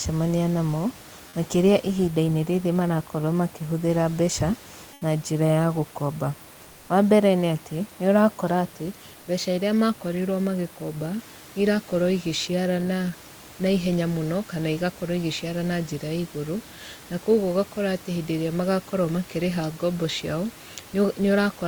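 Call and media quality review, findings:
Comfort noise in place of the background, 4.93–5.01 s (80 ms). Room background, about 25 dB below speech, briefly swapped for steady, featureless hiss about 3 dB quieter, then real ambience returns. Likely cause: sender-side discontinuous transmission, consistent with Opus DTX. Voice detector judged the gap silent and stopped sending; receiver synthesized shaped noise to fill it, losing the room's texture.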